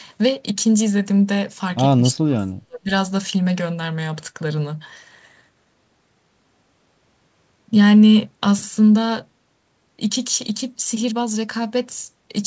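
From 2.15 to 2.9 s the speech drops by about 40 dB, likely speech suppressed in double talk as the echo canceller ducked its own talker along with the loudspeaker echo.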